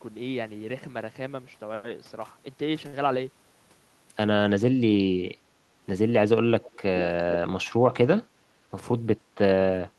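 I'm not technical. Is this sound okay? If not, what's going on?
No. There are three problems in this speech clip.

From 2.87 to 2.95 s there is a short stall from a late packet. A piece of the call arrived late, so the last sound was stretched by 56 ms until it came. Nothing is actually missing, which is what separates it from a dropout. It just hangs briefly.

At 6.63 to 6.77 s, and again at 7.01 to 7.06 s, there is an echo leak. A copy of the voice comes back about 0.4 s late, quiet the first time and clearly louder the second. That gap makes it a separate repeat, not the smooth blur of a roomy sound. The likely cause is the other side using a loudspeaker, with its microphone picking the voice up and sending it back.

From 8.44 to 9.01 s there is a jitter buffer speed-up. Audio had piled up, so the system trimmed tiny slices, about 50 ms in all, and the speech runs at 108% speed. The pitch stays the same, unlike simply playing a recording faster, which would raise it.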